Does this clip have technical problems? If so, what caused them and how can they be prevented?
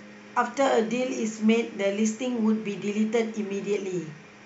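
No, this clip has no technical problems, so there is nothing to trace to a cause or to prevent.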